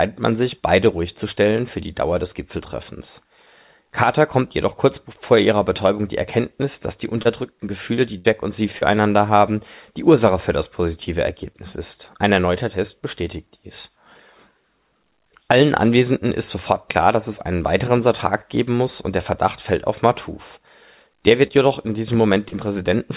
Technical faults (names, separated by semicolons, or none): short concealed packet loss; burst of packet loss